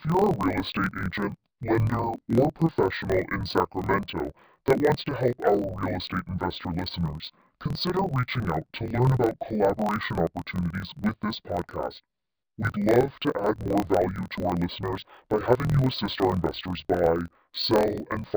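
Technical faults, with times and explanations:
Throughout: interleaved audio read as planar. Each 24 ms block of alternating left and right samples is split into first and second halves, so each channel plays its data at half speed. The speech therefore sounds an octave low, doubled and choppy, with a 41.7 Hz block-rate flutter.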